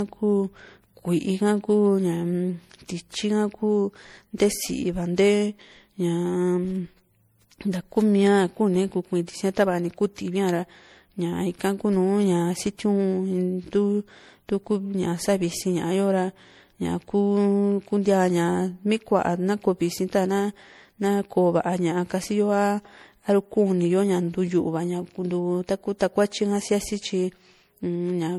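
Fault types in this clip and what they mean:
Generation loss, throughout the speech: the sound is swirly, smeared and hollow in a way one coding pass would not explain, with consonant attacks blurred and nothing above 20.8 kHz. The likely cause is repeated decoding and re-encoding, around five passes, through an MP3 chain that points to 64 kbit/s. Each pass quantises again on a shifted frame grid, so its noise and spectral gaps stack on those already there.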